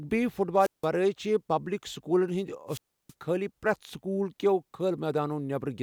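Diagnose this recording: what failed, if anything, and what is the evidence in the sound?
Wireless microphone squelch dropout in the radio link, at 0.58–0.87 s (muting about 170 ms) and 2.68–3.14 s (about 320 ms). The fading carrier brings up broadband hiss until the receiver's squelch shuts, leaving a flat, near-silent gap on the waveform and a blank column on the spectrogram before the speech returns.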